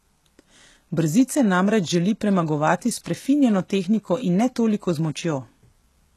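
Speech, with HE-AAC compression throughout: plainly audible treble artefacts and nothing above 12.3 kHz, likely from low-bitrate spectral band replication, consistent with roughly 16 kbps.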